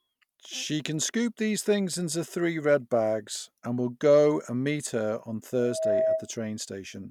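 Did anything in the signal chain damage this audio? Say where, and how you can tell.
Yes, there's a loudspeaker feedback squeal right after "and meet her on", running from about 5.57 s to 6.31 s. It's a single tone near 639 Hz that swells over roughly a third of a second until it sits around 5 dB above the speech. That points to the acoustic path ahead of the analogue stage: the mic is hearing its own loudspeaker, and at that one frequency the loop gain tops unity, so the tone keeps feeding itself.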